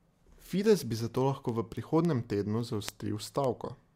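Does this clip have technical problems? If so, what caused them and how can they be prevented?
Yes. From 0.38 s to 3.72 s the speech carries word clock ticks: sharp clicks of uneven strength, about fifteen of them, recurring roughly every 0.3 s. The receiving device was running on its own clock rather than locking to the sender's, with the two rates apart by something like 70 ppm. Each time they slipped a full sample, one sample was dropped or repeated. Preventing it means slaving the receiver to the incoming digital signal or to a shared word clock.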